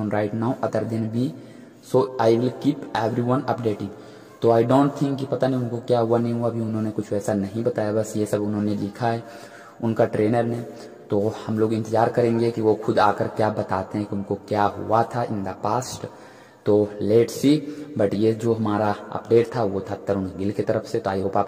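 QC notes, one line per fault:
No faults detected.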